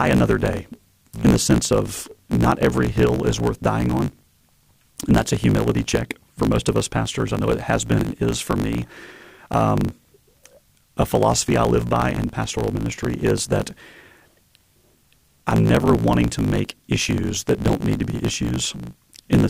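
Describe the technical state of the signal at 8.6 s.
At 8.6 s the speech carries a block size mismatch (truncated), present across the whole clip rather than only at this moment. One stage writes longer blocks than the next reads, so each block's tail is discarded. That fits 1024-sample blocks being cut short. The result is a buzz at about 54.4 Hz and speech running 1.16 times fast at near-normal pitch. On a waveform, regular splice discontinuities recur every 18 ms or so. A spectrogram shows evenly spaced vertical seams and harmonics of 54.4 Hz.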